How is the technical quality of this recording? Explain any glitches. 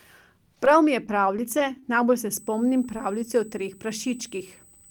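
The recording has two distinct faults: brief dropouts early on and a steady high-pitched tone in the second half.

From 0.55 to 1.83 s, just before "najbolj se", about seven tiny ticks and smears appear. These are scattered short gaps: lost or late packets, with each small hole patched by extending the preceding sound.

From 2.34 s to the end, after "najbolj se", a fixed 8 kHz whine sits about 25 dB below the speech. This USB whine comes from the bus's 125-microsecond microframe current pulses leaking through power or ground.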